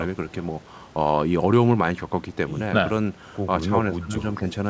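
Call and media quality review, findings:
Speech suppressed in double talk, 3.97–4.13 s: echo canceller likely could not separate near-end talker from loudspeaker echo during overlap and attenuated both. Speech level drops by about 20 dB. Same mechanism at 4.37–4.43 s: shallower suppression, speech dips by about 5 dB. Audio band-limited to 8 kHz throughout, consistent with a wideband call codec such as G.722 at 64 kbps.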